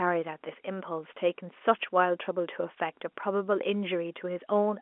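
There are no technical faults to describe in time order in this telephone-band speech.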